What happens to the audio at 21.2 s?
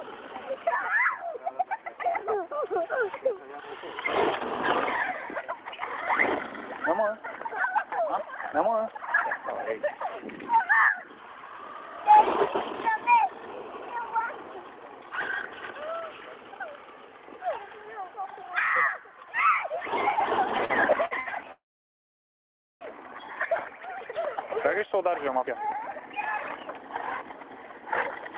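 At 21.2 s the audio is inside a burst of repeated stalls (stutter) running from 20.58 to 21.28 s. The sound catches four times, with about 180 ms of stretched material in total, roughly a quarter of that span. The longest hold lasts 70 ms. Packets were arriving late, so the jitter buffer kept running dry. Each time, the receiver prolonged the last sound until data caught up. Nothing drops out, but the audio drags and stutters.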